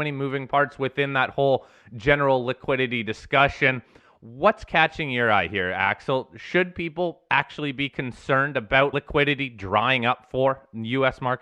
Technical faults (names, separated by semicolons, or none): damaged data in a compressed stream